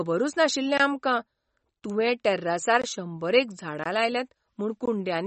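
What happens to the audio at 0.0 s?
From 0.0 s the speech carries plainly audible codec damage that lasts the whole clip. It sounds watery or swirly, and nothing remains above 8.3 kHz. The likely cause is MP3 compression at a low bitrate, around 34 kbps, which zeroes weak frequency lines and cuts the treble.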